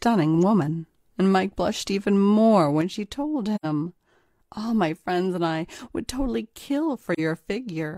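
Right after "blushed even more", at about 2.82 s, the level drops abruptly by about 6 dB and stays down to the end. That's most likely one channel dropping out: with the same sound on both sides, the mono sum simply loses half its level.

Then there's AAC frame loss with muting. At 3.55 to 3.66 s there's a soft-edged hole of about 85 ms, which fits two lost frames, and at 7.14 s a shorter dip of about 43 ms. The decoder zeroed the missing spectrum, so the overlapping windows fade the sound out and back in.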